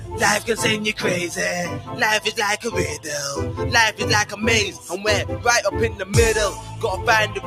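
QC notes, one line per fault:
Throughout: noise suppressor applied to music or sounds. A noise suppressor tuned for speech stays active on material it was never meant to handle, so it keeps judging sustained parts of the sound as background noise and pulling them down. Its gain moves over a range of around 10 dB as it reacts, and that constant riding of the level makes the sound pump and thin out. Sharp onsets pass while held portions sink.
1.79–1.99 s, 6.53–6.83 s and 7.28–7.46 s: sound cut by the noise suppressor. In each of these spans the suppressor misjudges the sound as noise and clamps down harder than it does elsewhere. The deepest drops are about 8 dB, about 6 dB and about 7 dB, each lasting a few tenths of a second. The result is a sudden dip in level, with steady or decaying parts hollowed out and their tails cut short.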